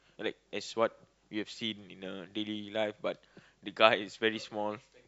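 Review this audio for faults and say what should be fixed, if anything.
Nothing here needs fixing; no faults were heard.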